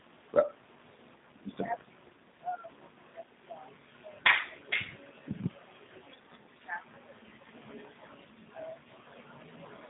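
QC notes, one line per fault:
Throughout: G.729 codec. Nothing above about 3.8 kHz, with a rough, synthetic buzz from pulse-rebuilt speech that plain telephone band-limiting lacks, which fits 8 kbit/s G.729A.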